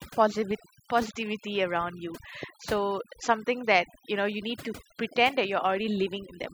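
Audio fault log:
Throughout, overdone noise removal: suppression set too aggressively mutes frequency bands near the noise floor, leaving near-silent gaps with twinkling specks and quiet parts of the speech stripped away.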